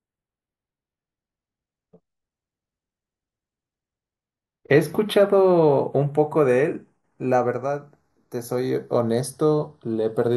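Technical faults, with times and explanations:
Throughout, channels drifting apart: the speech takes on a slow flanging as the delay between left and right creeps to a fraction of a millisecond, sweeping comb notches through the spectrum when summed; unlike a fixed offset, the colouring keeps moving, pointing to two clocks disagreeing by some tens of ppm.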